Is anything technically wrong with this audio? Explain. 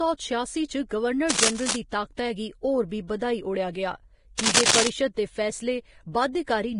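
Yes, there are two problems.

Throughout the clip the speech carries the signature of low-bitrate audio saved at a high bitrate. The file is a large MP3 with content reaching 20.1 kHz, but the sound has the smeared, swirly texture of a heavily compressed source, which fits an earlier encode at roughly 30 kbit/s. The likely cause is that audio from that small encode was re-encoded at a generous rate. That cannot bring back what the first codec threw away, so its artefacts survive intact. On a spectrogram this shows as patchy, blocky upper bands and holes between harmonics rather than a smooth spectrum.

Cable scratch noise appears twice, from 1.29 to 1.77 s and from 4.39 to 4.88 s. Each burst is a dense, uneven rustling over the speech, with the first about as loud as the voice and the second somewhat louder. The likely cause is a worn cable, connector or control being moved, so its contact resistance fluctuates rapidly and injects noise into the signal. 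In the waveform these sections appear as ragged, spiky clusters. On a spectrogram they are broadband vertical smears lasting about half a second each.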